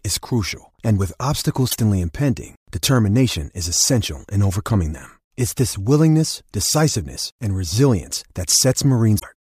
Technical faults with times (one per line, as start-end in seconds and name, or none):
1.67-1.76 damaged data in a compressed stream
9.16-9.24 damaged data in a compressed stream